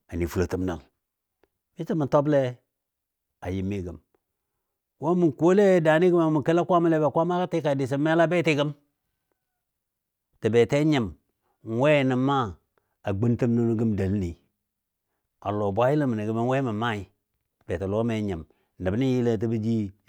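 No technical faults can be heard anywhere in the speech recording, so there is nothing to list in time order.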